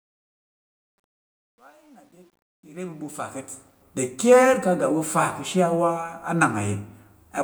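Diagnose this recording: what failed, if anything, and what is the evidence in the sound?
The fade-in from 0.0 to 3.82 s shows truncation distortion on a fade, introduced at a gain or sample-format conversion stage. Low-level samples were quantised to what sounds like 10 bits with no dither. The gritty speech is worst from 0.0 to 2.86 s. On a waveform this appears as staircase steps, and on a spectrogram as broadband hash.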